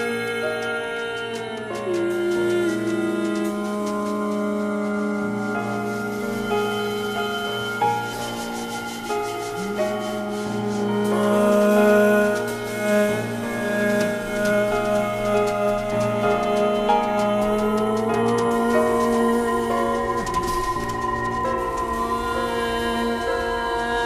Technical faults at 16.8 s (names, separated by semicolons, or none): none